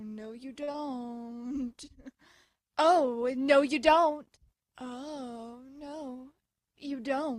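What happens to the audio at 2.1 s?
Nothing goes wrong at 2.1 s; the audio carries straight through that moment without any dropout, click, glitch or other fault.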